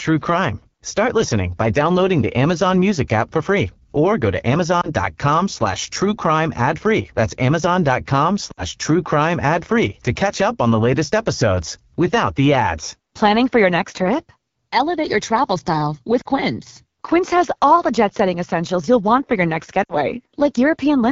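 Throughout, the AMR wideband (HD Voice) codec sounds rough and raspy, pointing to one of its lowest rates, about 8.85 kbit/s. A spectrogram shows smeared detail and noise-like filling between 6.4 and 7 kHz.

Lost AMR speech frames occur at 4.81 to 4.91 s after "free or go to", 8.52 to 8.64 s before "true crime ad free", 16.21 to 16.27 s, and 19.83 to 19.96 s after "want for your next". Each time, the decoder replays stale settings at falling gain. The single lost frame at 4.81 s is heard as a brief warble or dip, while the longer runs drop to near silence within two frames before the voice returns weak or rough, and the waveform shows a short sagging patch.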